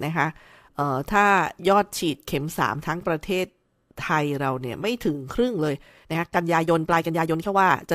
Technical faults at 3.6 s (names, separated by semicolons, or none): none